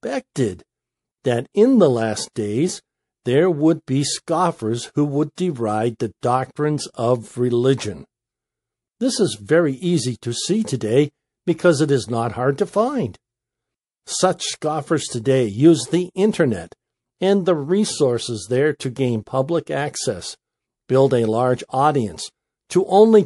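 MP3 compression runs throughout this speech. Weak detail flickers in and out between frames, giving a watery, swirly texture with metallic edges on s sounds. That is likely a low-bitrate MP3 encode, around 48 kbps.

Pre-echo comes at 2.33 to 2.36 s, after "that in the last" and before "days there would be", and again at 5.35 to 5.38 s, after "be scoffers who would" and before "deride the doctrines of". Quantisation noise from each attack spreads into the quiet moment before it, a hiss about 20 to 22 dB above the floor lasting 30 ms and 26 ms. This points to long blocks of about 48 ms being kept through the attacks.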